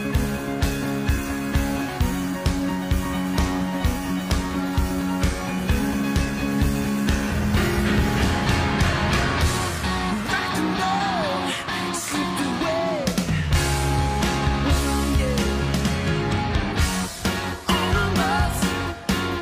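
No faults are audible anywhere in the clip.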